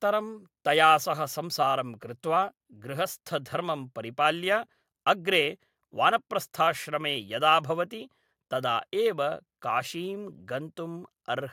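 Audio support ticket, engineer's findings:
Speech signal checked with no technical faults found, so no component is implicated and no action is needed on the audio path.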